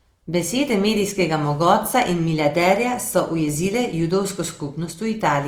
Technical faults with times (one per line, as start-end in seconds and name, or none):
0.00-5.47 Opus compression